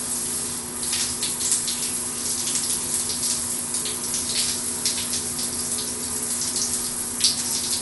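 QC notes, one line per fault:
Throughout, Dolby Digital compression: likely a starved AC-3 encode, fitting 64 kbps, strips everything above 11.4 kHz and noise-fills bare lines, so audio sounds dull and rough.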